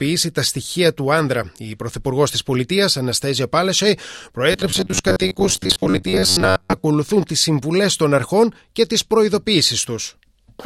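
From 4.52 to 6.85 s, audio likely arrived too seldom, so playback filled the gaps by looping a stretch of about 11 ms, with about half the sound repeated. This robotic sound from repeated short buffers imposes a rigid, metallic 93.8 Hz buzz that only loosely follows the original.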